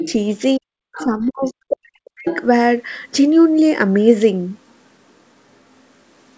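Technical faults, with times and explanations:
0.05–2.27 s, speech suppressed in double talk: The speech dips by as much as about 40 dB, for roughly 1.5 s in all. Both sides were likely talking together, so the echo canceller turned both down.
0.00–0.12, 0.94–1.52, 2.25–2.39, 4.68–4.75, 5.52–6.38 s, other side's voice leaking through: A second voice intrudes, about 10 to 15 dB below the speech early on and barely audible later. This is likely loudspeaker echo the canceller missed.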